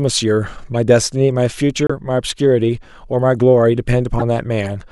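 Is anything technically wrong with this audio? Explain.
Yes. Brief chirps and squeaky bursts break into the speech at 0.75 s, from 1.87 to 1.91 s, and from 4.19 to 4.22 s. The first is faint, and the later two are harsh and much louder, peaking around -5 dBFS. This is a corrupt frame decoded fault: damaged bits in the compressed stream were played through anyway, so misread gains and codes put energy at the wrong frequencies for one frame, then several, then a couple.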